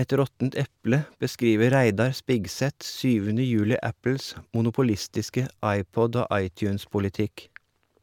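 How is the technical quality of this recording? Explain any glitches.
No technical faults are audible.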